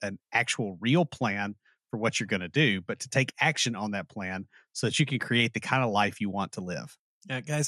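MP2 compression artefacts run throughout the speech, likely from MPEG Layer II coding at a low rate, which fits something near 80 kbps. Too few bits forced upper sub-bands to switch off and flicker, leaving dull, coarsely quantised sound with plainly audible gurgling, granular distortion.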